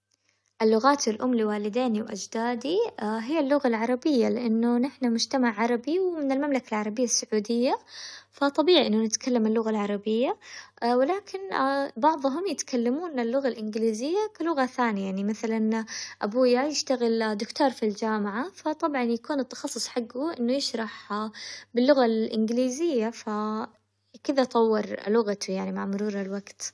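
Nothing stood out as a technical problem on listening to this speech recording.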